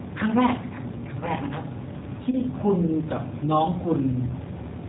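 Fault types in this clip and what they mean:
G.729 codec: The speech passed through a low-rate CELP voice codec that rebuilds each 10 ms frame from a vocal tract filter, a pitch predictor and a handful of pulses, and the sound fits G.729 at 8 kbit/s. Nothing above 4 kHz survives, so the speech is band-limited throughout. It has a plainly audible rough, synthetic edge.
VoIP packet loss concealed by the speech codec: A network packet went missing, which points to a single lost packet of about 20 ms. The decoder filled the gap by extending its last pitch and filter settings at falling gain. From 2.31 to 2.37 s the speech is stretched into a fading tone or coloured noise, and it stays weak or distorted afterwards while the codec's frame-to-frame state recovers.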